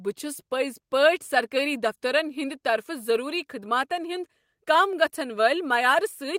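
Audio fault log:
Nothing stood out on listening to this speech recording.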